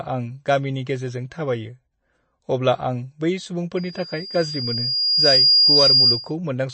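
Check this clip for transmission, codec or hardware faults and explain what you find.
Two faults are present.

Throughout, nothing is heard above 8.3 kHz, and the speech sounds watery and smeared. This is likely MP3 compression at a low bitrate, around 30 kbps, cutting treble to save bits.

From 3.77 to 6.34 s there is a loudspeaker feedback squeal. A microphone picks up its own loudspeaker, and at 4.8 kHz the loop gain exceeds one. The tone swells over about a second and a half to about 10 dB above the speech.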